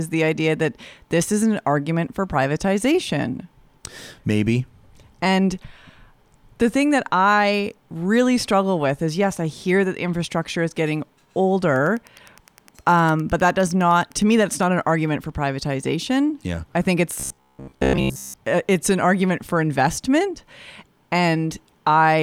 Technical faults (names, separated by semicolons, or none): Wi-Fi interference; robotic sound from repeated short buffers